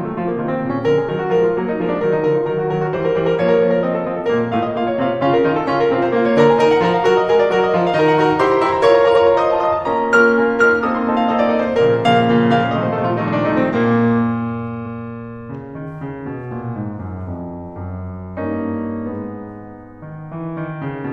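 At 9.11 s a short run of compressed frames was delivered twice, so the decoder plays the same 93 ms of music a second time, which fits two frames being repeated. The result is a brief stutter, and the clip runs about 93 ms longer. The same repeated-frames fault returns at 13.24 s over a shorter 46 ms block, likely a single frame, giving a quicker hiccup.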